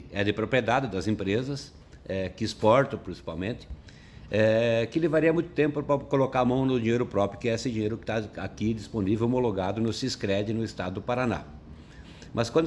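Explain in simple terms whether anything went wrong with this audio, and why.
Nothing went wrong here; no faults can be heard.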